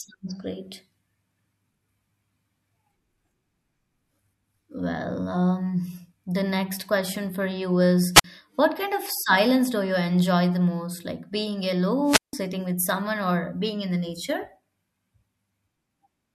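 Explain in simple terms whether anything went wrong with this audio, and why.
Two wireless microphone squelch dropouts: at 8.14 to 8.24 s, right after "question for you is", and 12.05 to 12.33 s, just before "with someone or being". The radio link faded, hiss rose, then the receiver muted the speech for roughly 50 ms and 170 ms.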